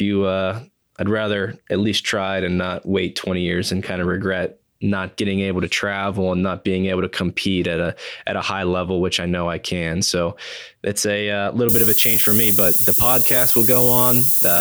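At 11.69 s, just after "it's a uh", the speech drops to a low bit depth with noise shaping. This lasts until the clip ends at about 14.6 s. The sound behaves like a stream quantised to very few steps, which fits roughly 3 bits. The rounding error is fed back so the noise is pushed up in frequency. It is heard as a steady, thin hiss that climbs strongly toward the top of the band. The hiss sits close in level to the speech itself.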